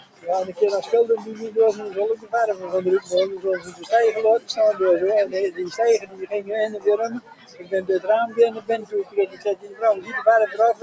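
Level that breathes and pumps runs through the whole clip, with sustained parts and tails sinking by around 15 dB while sharper onsets punch through. This is a noise suppressor applied to music or sounds. A suppressor built for speech was left active, so it treats steady material and decay as background noise and keeps pulling it down. The top end stops at 8 kHz, as expected from call microphone processing.

At 0.00 to 0.26 s the sound dips by about 16 dB. It sinks again by about 15 dB at 2.16 to 2.33 s, by about 11 dB at 3.59 to 3.92 s, by about 12 dB at 5.99 to 6.27 s, and by about 15 dB at 7.2 to 7.72 s. The longest stretch, 8.57 to 9.81 s, drops by about 15 dB over most of a second. Each is sound cut by the noise suppressor, where steadier passages were misjudged as noise and muted harder than their surroundings.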